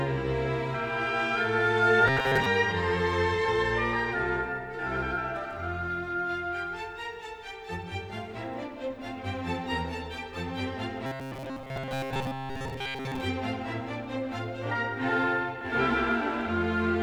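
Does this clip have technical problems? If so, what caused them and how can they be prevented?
Yes: robotic sound from repeated short buffers at 2.08–2.46 s and 11.06–13.21 s. A rigid 133 Hz buzz, visible as evenly spaced spectrogram harmonics, likely comes from repeating 7.5 ms buffers over most of the audio. Larger jitter buffers and steadier delivery prevent it.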